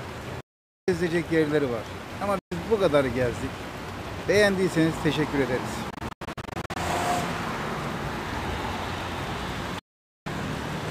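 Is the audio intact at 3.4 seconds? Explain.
Yes, the audio is intact at 3.4 seconds, with no dropout, click, distortion or other fault at that point.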